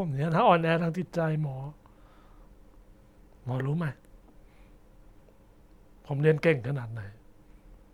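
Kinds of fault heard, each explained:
No kinds of fault are heard in this speech clip.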